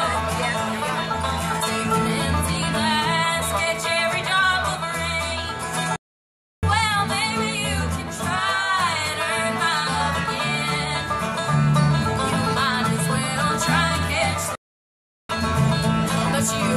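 The audio cuts to silence from 5.96 to 6.63 s and again from 14.55 to 15.29 s, then resumes: a playback stall, likely the player starving for data.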